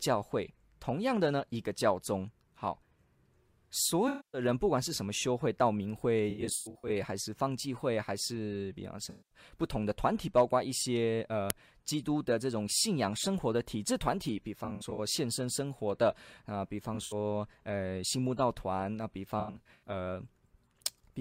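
A speech clip with two kinds of fault. The main one is AAC frame loss with concealment, in six places. At 4.08 to 4.41 s, about 256 ms of audio is missing in one stretch. At 9.09 to 9.38 s, about 213 ms is missing. The other four losses are scattered. From 6.30 to 6.91 s, 363 ms is lost, in runs of up to roughly 100 ms. From 14.64 to 14.99 s, 171 ms is lost, in runs of up to roughly 70 ms. From 16.94 to 17.14 s, 107 ms is lost, also in runs of up to roughly 70 ms. From 19.40 to 19.86 s, 299 ms is lost, in runs of up to roughly 100 ms. In each gap the decoder had no frame to play. It rebuilt sound from the last good spectrum, with scrambled signs or interpolated energy. The patches sound smeared, noisy or phasey, not like the real signal. The second fault is an uninitialised buffer at 11.50 s. It is a single crack lasting 1.45 ms, which fits a 64-sample block. That block was played before any audio was written into it. 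Leftover memory came out as samples.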